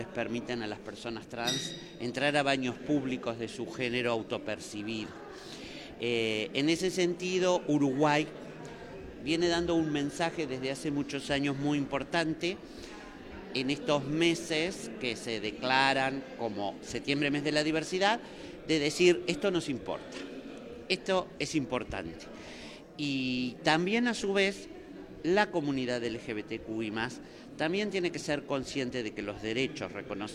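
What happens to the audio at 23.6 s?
Nothing goes wrong at 23.6 s; the audio plays through that moment intact, with no dropout, click or other disturbance.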